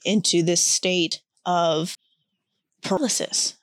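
At 1.12 s, just after "into this", then at 1.95 s and 2.97 s, the speech jumps abruptly, skipping forward, losing roughly a tenth of a second at the first two and about a fifth at the last. Each is likely a dropped buffer (overrun), where unread audio was overwritten and the edges spliced together. Unlike a dropout, no silent gap is heard; the sound simply lurches ahead.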